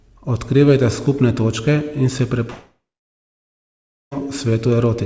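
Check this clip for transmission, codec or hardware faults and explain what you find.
One transmission fault, heard through a G.722 call path that carries nothing above 8 kHz. From 2.50 to 4.13 s, a likely long network dropout: with no audio arriving, the last sound fades as a brief buzz or hiss, then about 1.3 s of silence, and the speech resumes with that stretch lost.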